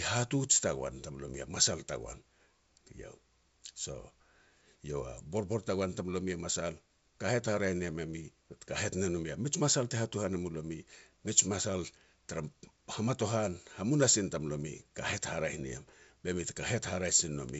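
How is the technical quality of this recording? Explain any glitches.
No glitches are audible.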